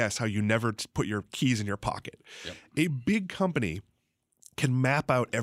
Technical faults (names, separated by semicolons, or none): loud pop